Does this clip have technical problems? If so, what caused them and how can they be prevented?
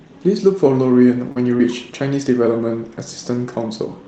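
Yes. Short concealed packet loss occurs at 1.31–1.37 s and 1.58–1.60 s. About 40 ms and then 20 ms of audio reached the decoder too late, so it extended the preceding sound and blended back, leaving brief smears. A deeper jitter buffer or forward error correction would prevent this.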